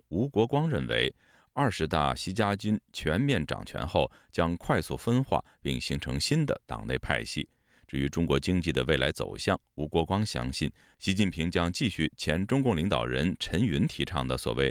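No technical faults can be heard anywhere in the recording, which stays intact and continuous throughout.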